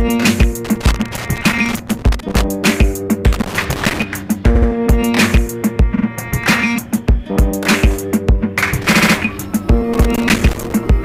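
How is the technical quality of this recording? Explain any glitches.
The recording has two kinds of fault: bursts of crackle and three short stutters.

Loose connector crackle comes in at 0.65 to 2.44 s, 3.33 to 4.03 s and 9.94 to 10.73 s. A worn or dirty contact keeps making and breaking as it shifts. Each break chops the signal. Any DC on the line turns the breaks into pops. The result is an irregular, scratchy crackle lasting up to about 1.8 s.

Repeated frames cause the stutters. At 4.54 to 4.68 s, a 70 ms block plays twice more, adding 139 ms. At 5.95 to 6.04 s, a 46 ms block repeats twice, adding 93 ms. At 8.93 to 9.14 s, a 70 ms block plays three extra times, adding 209 ms. A run of compressed frames was sent twice or more. The 70 ms blocks fit three short codec frames, and the 46 ms block fits two. Each repeat is heard as a quick stutter.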